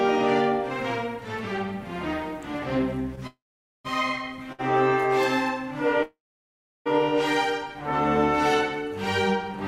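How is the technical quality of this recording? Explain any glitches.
The recording has three timing glitches in which playback pauses and resumes, with nothing lost.

Call audio freeze, 3.27–3.86 s and 6.03–6.88 s: the last sound fades into about 0.48 s and 0.7 s of silence, then resumes, likely from an emptied jitter buffer.

Short stall from a late packet, 4.52–4.61 s: the last sound is stretched for 61 ms, without fading to silence, until the delayed packet arrives.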